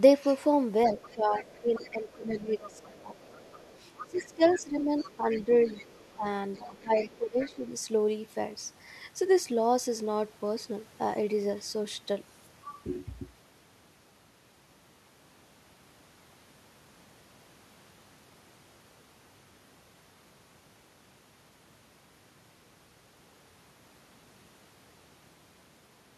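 From 0.88 to 2.37 s, a faint second voice sits about 25 dB under the speech: the other side's voice leaking through, likely echo from a loudspeaker that the echo canceller left in the microphone signal. It returns briefly at 2.73 to 2.83 s, about 30 dB down, and then at 3.17 to 4.63 s, 4.98 to 6.16 s and 6.54 to 7.55 s, about 20 dB down. Unlike the dips described next, this fault adds sound that shouldn't be there.

Alongside it, speech is suppressed in double talk at 0.9 to 3.36 s, 4.05 to 6.26 s and 6.57 to 7.63 s. While both sides talk, the canceller likely can't tell the talker from the echo and pulls everything down, so the talker's own voice sinks by up to roughly 15 dB in patches. Here the fault takes sound away rather than adding any.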